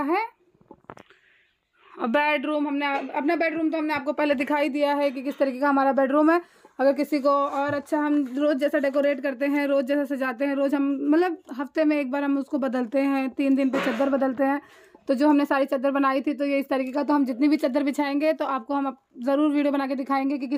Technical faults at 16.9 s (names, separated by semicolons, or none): none